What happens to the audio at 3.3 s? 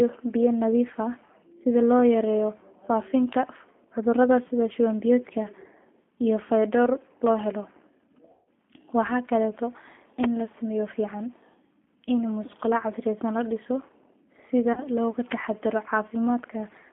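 At about 3.33 s there's a sharp snap, over in a few milliseconds, just before "cudurada sidhi shuwan biyodka". It sounds like an electrical switching spike, most likely a nearby switch or static discharge arcing and the line picking up that short burst on top of the sound.

Underneath that, as everywhere in the clip, you're hearing the G.729 codec at 8 kbit/s. It rebuilds speech from a vocal-tract filter, a pitch predictor and a few pulses per frame, so the voice comes across clearly rough and synthetic, squeezed into a 200 Hz to 3.4 kHz phone band.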